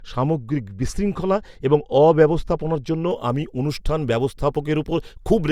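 A speech clip whose first 3.11 seconds, up to "আমি অনুষ্ঠান", carry wrongly applied de-emphasis. A treble cut meant to reverse pre-emphasis has hit audio that never had any, or was applied twice. The smooth downward slope, about 10 dB lower at 10 kHz than at 1 kHz, dulls and muffles the sound, unlike a low-pass filter's abrupt cut-off.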